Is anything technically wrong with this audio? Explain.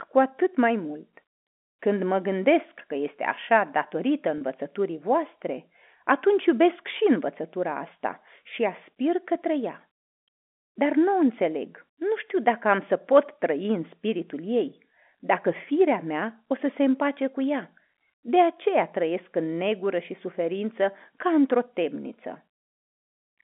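Yes. Packet loss with pitch repetition at 4.38 to 4.41 s: a 30 ms gap, fitting one lost packet, is bridged by repeating the last pitch period, giving a brief held, buzzy blip over the telephone-band G.711 sound.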